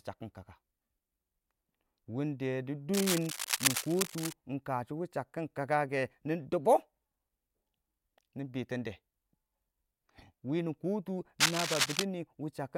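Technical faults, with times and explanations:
2.93–4.33 s and 11.39–12.05 s, cable scratch noise: dense, uneven bursts of scratching sit over the speech, roughly as loud as it. The first ends just before "win kashɔ". A worn cable or connector is likely being moved, so its contact resistance changes rapidly.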